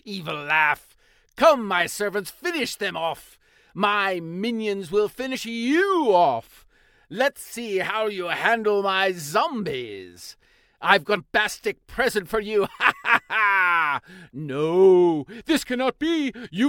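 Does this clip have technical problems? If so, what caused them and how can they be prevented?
Yes. Damaged data in a compressed stream causes brief glitches at 5.33 s and 11.16 s as the decoder misreads corrupted frames. Use checksummed, error-checked transfer and storage so files arrive intact.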